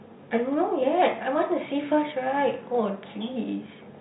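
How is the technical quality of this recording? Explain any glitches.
No glitches can be heard in the recording. The speech comes through G.711 A-law telephone coding, so nothing above 4 kHz is present, and any quantisation noise riding under the voice is faint at most.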